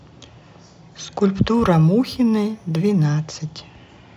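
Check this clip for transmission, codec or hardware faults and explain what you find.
One fault is present. From 1.54 to 3.04 s there is imaging from linear upsampling. The sample rate was raised by straight-line interpolation between samples, which fits a 16 kHz source brought up to 44.1 kHz. That weak filter dulls the top of the band and leaves a mirrored copy of the spectrum between 8 and 16 kHz, roughly 40 dB down. It is heard as a faint metallic shimmer on the sibilants.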